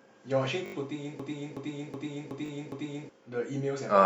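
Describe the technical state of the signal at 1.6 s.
At 1.6 s, a 0.37 s slice of speech repeats in a skipping-record loop, about 2.7 times a second, from 1.20 to 3.09 s. This system hang loop happened because playback froze while the hardware kept cycling a ring buffer, which fits a 16384-sample buffer, replacing around two seconds of audio.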